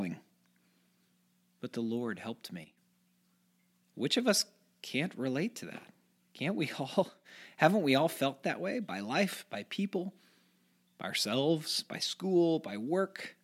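At 2.64 to 2.77 s and again at 7.04 to 7.25 s, a sudden gain jump drops the level by about 8 dB and then about 6 dB, likely from an unramped gain change. The speech and background noise fall together instantly, unlike a gradual fade or compressor pumping.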